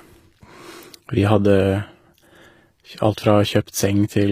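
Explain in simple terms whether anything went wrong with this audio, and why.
Throughout the speech, the s sounds come out gritty and lispy, which is most likely HE-AAC compression. Unlike simple muffling, the treble stays bright but is rebuilt from lower sounds.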